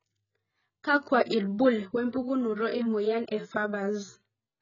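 Speech carrying AAC compression damage throughout: nothing above 7 kHz, leaving it dull and smeared with a warbly, fizzy edge on sibilants, likely from heavy AAC-LC coding at a very low bitrate near 12 kbps. A spectrogram shows a hard ceiling at 7 kHz.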